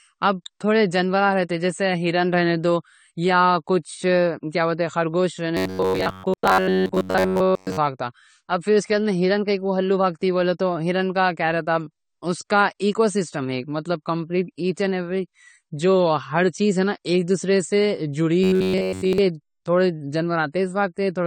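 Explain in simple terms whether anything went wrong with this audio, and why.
Yes, two things went wrong. The speech was most likely squeezed hard by AAC compression, which throws away detail the encoder judges least important. As a result, the whole recording sounds dull, smeared and fizzy.

From 5.57 to 7.79 s, and again from 18.44 to 19.18 s, new audio likely arrived too slowly. The player filled the gaps by replaying the same tiny snippet, about a hundredth of a second long, over and over, covering roughly 70 percent of those stretches. This is robotic sound from repeated short buffers: the speech turns into a stiff metallic buzz at about 94 Hz.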